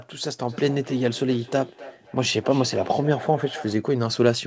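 From 0.49 s to 3.89 s the speech keeps coming back at roughly a third of a second after itself, each return thinner and more ringing, peaking at about 17 dB below the direct speech. This is feedback echo between two devices: two devices in the same room on one call, one replaying what the other's microphone sent, which that microphone then recaptures. Each device's echo canceller only removes its own playback, so the loop survives. The call path's bandwidth ends at 8 kHz, which fits a wideband call codec.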